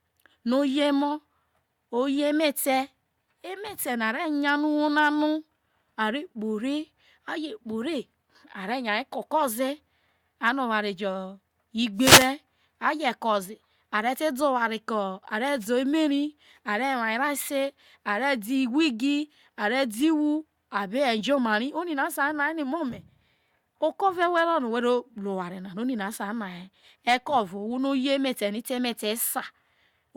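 The analogue radio link fades as reflections cancel, so receiver noise rises: wireless microphone noise hits swish through the speech from 11.96 to 12.35 s and from 15.59 to 15.67 s.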